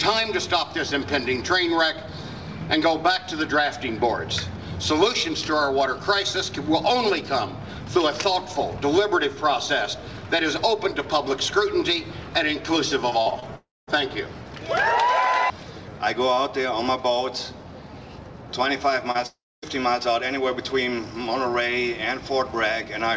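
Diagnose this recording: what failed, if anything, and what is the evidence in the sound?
Network stage, repeated packet loss (robotic sound): from 13.10 to 13.44 s, four short holes, the longest 43 ms, are each patched by extending the last sound, giving a choppy texture rather than one clean gap.

Network stage, long network dropout: at 13.56–13.89 s and 19.26–19.64 s, a fading buzz or hiss gives way to roughly 0.2 s of silence. This is likely packets that never arrived, and it is far longer and emptier than brief concealment.

Network stage, short concealed packet loss: at 19.11–19.16 s, about 40 ms is bridged by continuing the preceding sound, heard as a brief smear, unlike the dropouts.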